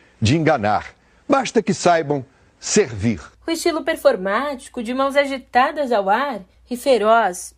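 No technical faults can be heard anywhere in the speech. Nothing breaks, drops out or changes character at any point in the recording.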